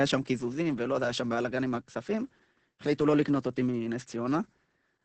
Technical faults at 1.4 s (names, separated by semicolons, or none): Opus voice compression